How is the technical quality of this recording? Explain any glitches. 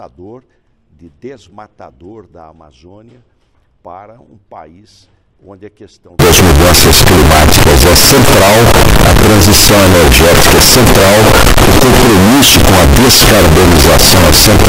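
The recording breaks down badly partway through. From 6.19 s to the end at about 15 s, the sound turns into a very loud, harsh, buzzing distortion, and quiet stretches blast out as strongly as everything else. The likely cause is signed and unsigned mixed up: the samples, which fits 16-bit data, are being read with the wrong sign convention, flipping the top bit so that every pass through zero becomes a jump across the full range.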